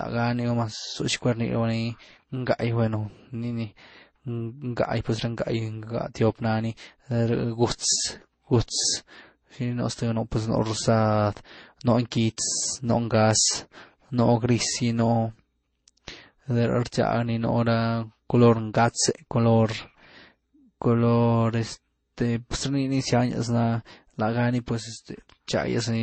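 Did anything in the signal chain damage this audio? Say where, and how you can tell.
Yes, at the codec stage. Nothing is heard above 8.3 kHz, and two different kinds of codec artefacts overlap throughout. This is likely transcoding between lossy codecs, which fits MP3 then Vorbis.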